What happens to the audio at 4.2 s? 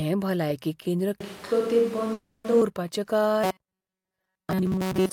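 At 4.2 s you're right in the middle of robotic sound from repeated short buffers, which runs from 3.44 s through to the end of the clip at 5.13 s. The likely cause is fresh audio arriving too slowly, so the playback keeps looping a tiny slice, around 5 ms, while most of the real material gets skipped. That looping stamps a fixed 188 Hz buzz onto the speech, giving it a stiff, metallic tone that only loosely tracks the original.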